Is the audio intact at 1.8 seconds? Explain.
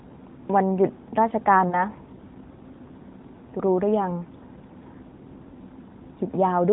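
No. Lost AMR speech frames at 1.68 to 1.86 s: about 40 ms of audio, consistent with two corrupted 20 ms frames, was concealed by repeating earlier pitch and vocal tract settings at falling gain, giving a brief smeared warble and weakened onset.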